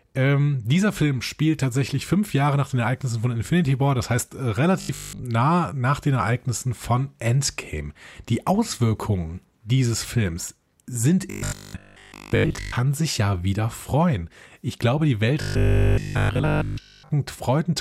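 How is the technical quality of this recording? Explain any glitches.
The speech has three stretches of robotic sound from repeated short buffers, at 4.81 to 5.25 s, 11.30 to 12.76 s and 15.41 to 17.11 s. Each turns the voice into a stiff metallic buzz at 50 Hz that only roughly tracks the words, most likely because audio arrived late and a 20 ms piece was looped, skipping most of the real signal, and all of it in the last stretch. A spectrogram shows evenly spaced 50 Hz harmonic lines; the waveform shows identical repeating 20 ms cycles.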